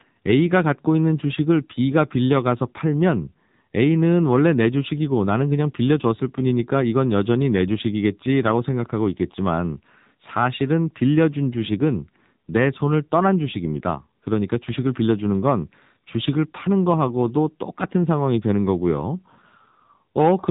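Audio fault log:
throughout, AMR narrowband mobile codec: the speech has passed through the AMR-NB mobile speech codec at a low rate. Its buzzy, synthetic edge fits roughly 7.4 kbps. The codec rebuilds each 20 ms frame from a vocal-tract model driven by a few pulses, so fine detail is lost and the damage is plainly audible. Content at 8 kHz sampling stops near 3.8 kHz, leaving the speech dull, boxed-in and telephone-like.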